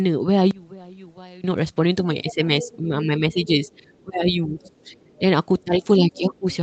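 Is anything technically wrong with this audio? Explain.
Yes. The speech is repeatedly turned down while a second voice sits faintly underneath it, the pattern of an echo canceller struggling during double talk.

Speech suppressed in double talk occurs at 2.23 to 2.41 s, 2.64 to 4.60 s, 4.83 to 4.95 s and 5.64 to 6.46 s. The deepest dips are about 10 dB in the short events, about 15 dB in the last one, and about 20 dB in the long middle stretch, where roughly a second of speech is pulled down in pieces. The likely cause is that both ends spoke at once, so the canceller could not separate the near talker from the loudspeaker echo and attenuated everything. Unlike packet loss, the level sinks and recovers in step with the overlapping voice rather than snapping to silence or leaving a robotic fill.

The other side's voice leaks through at 2.29 to 2.77 s, about 15 dB below the speech, then more faintly at 4.61 to 4.71 s (about 30 dB down) and 4.96 to 5.19 s (about 35 dB down). 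These are likely residual echo from the far party on the loudspeaker that the canceller failed to remove. It is a separate voice in scraps, not a smeared tail of the talker's own sound as reverberation would be. The audio is band-limited to 8 kHz, which fits a wideband Opus call.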